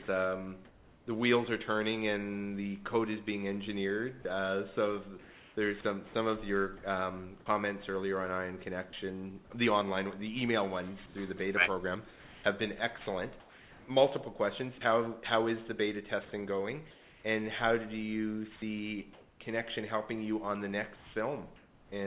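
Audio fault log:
4.22–6.83 s and 11.06–14.81 s, sound chopped by the voice detector: the sound keeps dropping out and coming back, with about 450 ms and then 960 ms of it swapped for flat synthetic hiss. It's likely a sender-side voice detector toggling transmission on and off.
16.91–17.24 s, 19.13–19.40 s and 20.96–21.92 s, comfort noise in place of the background: during these pauses the real background gives way to a steady, featureless noise. That's likely discontinuous transmission, with the receiver filling the gap. The first fill sits about 2 dB below the real background and the second about 3 dB above it. Across the whole clip nothing reaches above 4 kHz, which fits a 64 kbps G.711 call codec.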